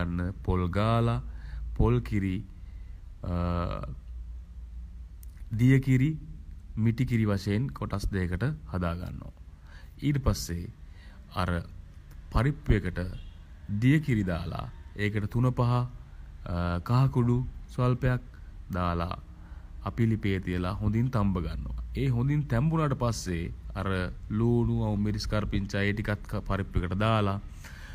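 No technical faults can be heard anywhere in the recording, and the signal stays steady and unbroken throughout.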